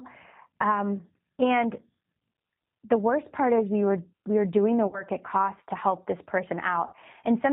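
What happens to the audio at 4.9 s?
Between 4.87 and 5.03 s, just after "we were doing the", the call suffers VoIP packet loss concealed by the speech codec. About 60 ms of audio goes missing, which fits two lost packets. The decoder fills the gap by repeating its last pitch period and vocal tract filter at falling gain, so the sound smears and fades. Because each frame builds on the previous one, the speech stays weak or distorted for tens of milliseconds or more after packets return, into "at cost to help".

Underneath this, the whole clip passes through the G.729 codec (G.729A at 8 kbit/s), with plainly audible damage. The speech is rebuilt from a filter, a pitch predictor and a few pulses per frame, and nothing above 4 kHz passes, so it sounds narrowband, rough and slightly synthetic. That same frame-by-frame model is what shapes the concealment.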